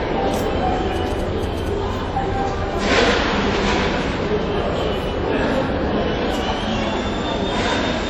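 From the start and throughout, the sound is ringing and washy, with a hiss that rises and falls with the signal. This is likely WMA compression, which fits a bitrate around 48 kbps. On a spectrogram, energy stops sharply at 18.8 kHz, with holes where weak components were dropped.

From 0.96 to 1.68 s, GSM signalling bursts from a nearby 2G phone are picked up and rectified, producing a galloping dit-dit-dit of short buzzes at 217 Hz, well below the main sound. A waveform shows clustered spikes; a spectrogram shows stacked harmonic lines.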